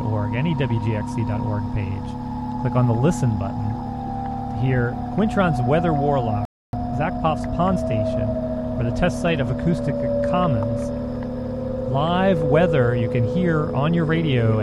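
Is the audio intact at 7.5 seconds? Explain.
No, 7.5 s falls inside a time-compressed catch-up from 6.73 to 7.83 s. The player trims and cross-fades tiny slices to recover backlog, so things rush at 1.25x with unchanged pitch.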